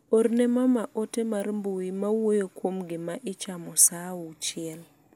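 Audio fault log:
Nothing stood out on listening to the speech in this recording.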